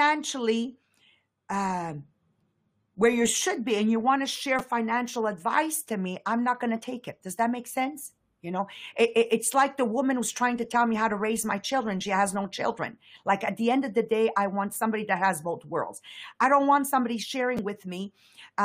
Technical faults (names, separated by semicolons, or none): repeated buffer